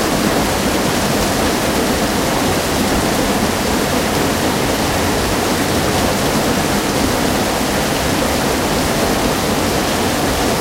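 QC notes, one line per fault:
2.96 s, repeated buffer: a click or brief buzz rather than an audible stutter. A slice of about 1.45 ms, which fits a 64-sample buffer, plays three extra times back to back, with a hard join at each repeat. Fresh audio missed its deadline, so the output replayed the last block. Because the block is so short, the rapid repeats fuse into a click instead of a recognisable echo, and essentially no audio is lost.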